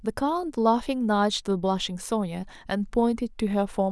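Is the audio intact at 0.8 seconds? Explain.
Yes, the audio is intact at 0.8 seconds, with no dropout, click or distortion at that moment.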